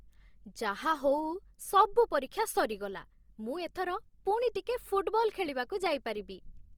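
Opus compression affects the whole speech clip, plainly audible as rough, grainy, noise-tinged tone. The likely cause is Opus CELT mode at a rate fitting 24 kbps: band energies are kept, but starved bands are filled with folded or noise content. Bandwidth stays full, to 20.2 kHz.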